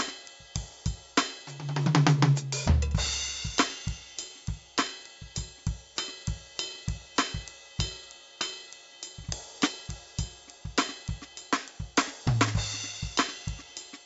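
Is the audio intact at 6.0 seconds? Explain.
No. At 6.0 s, as across the whole piece of music, 4-bit ADPCM compression adds a gritty hiss that swells with loud passages and smears sharp attacks as the step size lags. Nothing sits above 7.7 kHz, fitting a 64 kbps stream. A spectrogram shows broadband noise tracking the music's level beneath a hard ceiling.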